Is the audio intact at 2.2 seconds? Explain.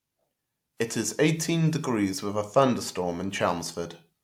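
Yes, at 2.2 seconds the speech is intact, with no dropout, click, distortion or other fault audible at that moment.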